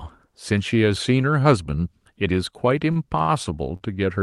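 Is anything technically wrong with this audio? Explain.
Yes. The speech has five short stalls from late packets, at 2.91–2.98 s, 3.18–3.22 s, 3.22–3.30 s, 3.76–3.82 s and 3.94–3.98 s. The jitter buffer ran dry each time, so the receiver held the last sound for roughly 20 to 60 ms, then resumed exactly where it left off. Unlike packet loss, nothing is skipped. Sounds are simply drawn out, with a faint buzzy or dipping quality.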